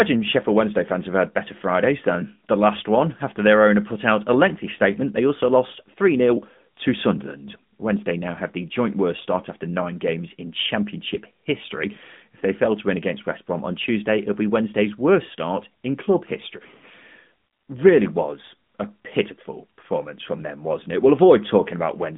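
This speech clip carries AMR narrowband mobile codec damage throughout. Nothing passes above 3.7 kHz, and the audible band runs from 150 Hz to 3.6 kHz. The buzzy, synthetic coloration fits a mid-rate mode near 10 kbps.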